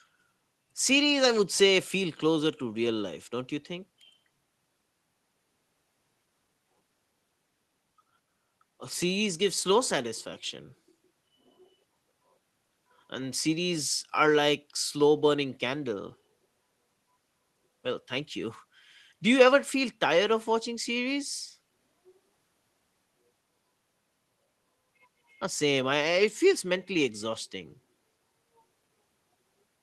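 No technical faults can be heard anywhere in this speech recording.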